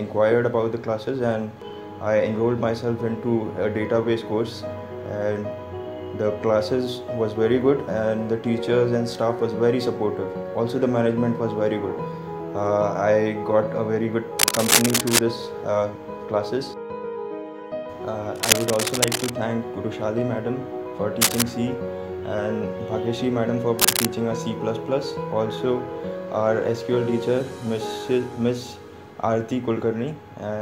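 Bursts of cable scratch noise turn up at 14.39–15.19 s, 18.36–19.30 s, 21.21–21.42 s and 23.79–24.07 s. It's a rough, uneven rustle sitting about level with or a bit above the sound, likely a worn lead or connector being moved so its contact resistance jumps around.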